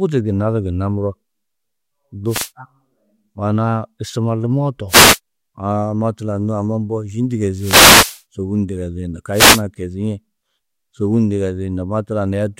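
Four wireless microphone noise hits break into the speech at 2.26–2.51 s, 4.88–5.19 s, 7.56–8.22 s (just after "mbo yî") and 9.32–9.62 s. Each time, the FM radio signal fades and receiver hiss surges as a short static swish. On a spectrogram, each shows as a broadband noise block. On the waveform, each is a fuzzy burst.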